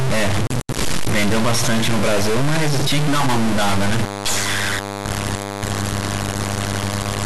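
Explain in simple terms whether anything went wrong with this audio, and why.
Yes: from start to end the speech carries a harsh, buzzy edge, and even the pauses hiss fairly loudly. That points to a stuck bit, likely, rather than clipping, which would spare the quiet gaps.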